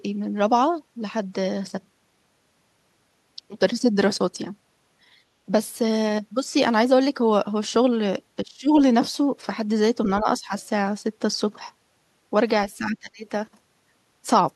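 The speech drops out in three short patches, from 8.43 to 8.76 s, 10.21 to 10.53 s, and 12.78 to 13.22 s. The level dips sharply, by around 20 dB in the first and last patches and about half that in the middle one. This is likely speech suppressed in double talk. The echo canceller seems to have mistaken this talker for loudspeaker echo while both sides spoke, so it turned the speech down.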